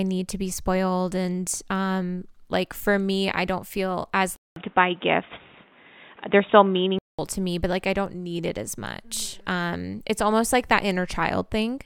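At 4.36 s the speech cuts out for 200 ms, then returns dull and boxy with nothing above 3.8 kHz, a few dB off in level, over new background noise. That's likely an input switched to a poorer device, and it clears at 7.19 s.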